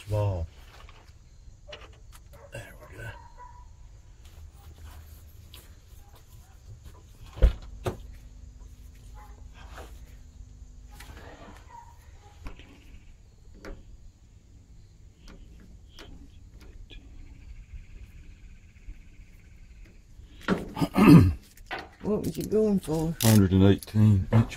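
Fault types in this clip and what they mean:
Mains hum: a steady low 50 Hz drone about 25 dB under the audio, caused by the power line coupling in through a ground loop or transformer.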